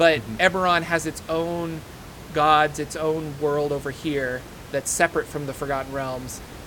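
Nothing in this speech clip stood out as a problem on listening, with only the room's own background noise audible at about 17 dB below the speech.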